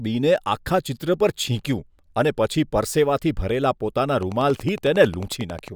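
From 4.23 s to 5.69 s a train of clicks runs over the speech: about fifteen sharp, near-identical ticks at a regular 11 per second, peaking roughly 5 dB above the speech level so they stand out clearly, including in any gaps. The even spacing and uniform shape point to a periodic disturbance outside the recording itself, likely electrical interference from nearby equipment or a faulty connection or power supply.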